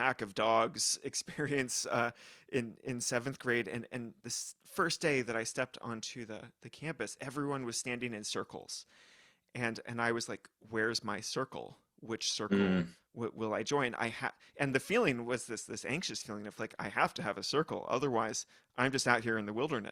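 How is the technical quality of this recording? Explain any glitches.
The recording has one clear glitch. Sample clock jitter runs from 1.60 to 4.98 s. The converter's timing wanders by around 2 microseconds, so samples land slightly off. Steep, loud parts of the speech suffer most, adding a hiss or roughness roughly 30 dB below the signal that disappears in pauses.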